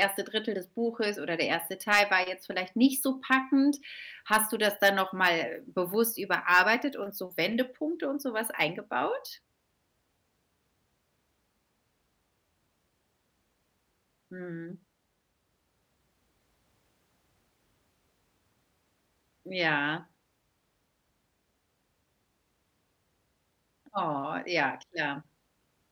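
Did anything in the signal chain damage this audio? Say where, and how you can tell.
Yes: harsh crackle on speech peaks at 0.02–0.05, 1.53, 1.92–2.01, 3.32–3.35, 4.33–4.37, 4.85–5.29 and 6.34–6.60 s. That is hard clipping: peaks overrunning the converter or sample format by up to about 5 dB, cut flat into added harmonics.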